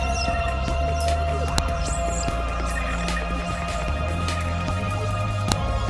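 Separate WAV pieces were joined without their headers being stripped, so each header's few dozen bytes of metadata ended up being read as sample values. That happens at 1.58 s and again at 5.52 s, where a new piece begins. Each time it comes through as file header played as audio: a brief, sharp, loud click or snap that cuts across the sound regardless of what the signal is doing at that moment.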